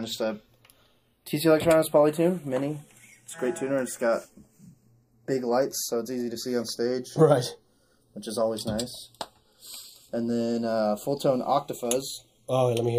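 Throughout the audio, the two channels drift apart: their sources run on separate clocks, off by roughly 20 ppm, so the delay between them creeps up to a fraction of a millisecond. Summed to mono, the comb notches sweep slowly, heard as slow flanging rather than the fixed coloration of a constant offset.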